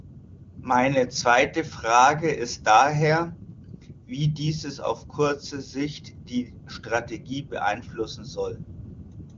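No technical faults can be heard in this speech, which shows the sound of the AMR wideband (HD Voice) codec at a rate consistent with its top setting of 23.85 kbit/s, with no content above about 7.5 kHz and at most faint coding damage.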